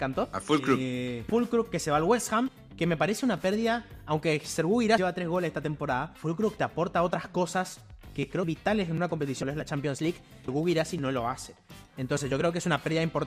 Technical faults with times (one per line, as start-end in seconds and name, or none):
1.29 compressed frames skipped
2.48 compressed frames skipped
4.97 compressed frames skipped
8.43 compressed frames skipped
9.42 compressed frames skipped
10.48 compressed frames skipped